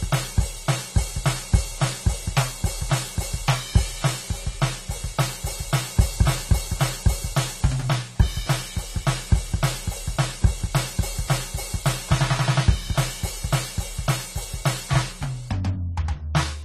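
A low-bitrate AAC encode is the likely culprit here, with damage that runs through the whole piece of music and is plainly audible. The encoder seems to have had too few bits to spend, which fits a rate around 32 kbps, so it discarded everything above 14 kHz and coarsely quantised what remained. The top end sounds dulled and closed in, sustained tones warble, and transients smear.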